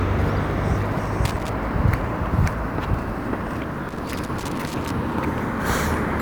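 Loose connector crackle hits at 1.25–1.49 s and 3.89–4.91 s. A failing contact chops the signal into scratchy bursts, which show as irregular broadband spikes and dropouts.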